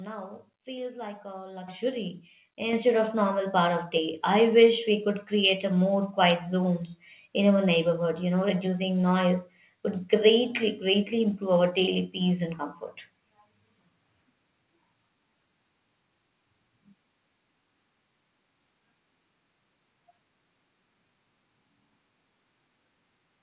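Microphone volume stepped up at 1.68 s, just after "feels like a", and again at 2.73 s, just before "of normal part of": the input level of the microphone was raised abruptly, first by about 9 dB, then by about 6 dB. Voice and background noise jump louder together at each point, mid-speech, with no fade. The audio, limited to 4 kHz as though through a G.711 narrowband call codec, carries both steps.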